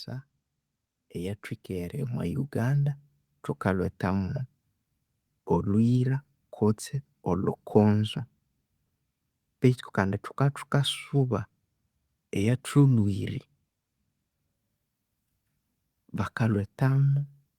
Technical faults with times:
1.14-3.01 automatic gain rising

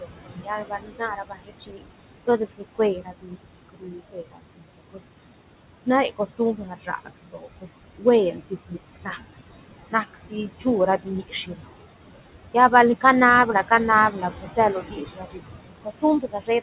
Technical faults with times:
0.00-16.62 noise suppressor artifacts
0.00-1.88 speech cut by the noise suppressor
2.26-5.07 speech cut by the noise suppressor
5.84-9.19 speech cut by the noise suppressor
9.90-10.66 speech cut by the noise suppressor
10.98-11.68 speech cut by the noise suppressor
14.11-15.41 speech cut by the noise suppressor
15.82-16.62 speech cut by the noise suppressor

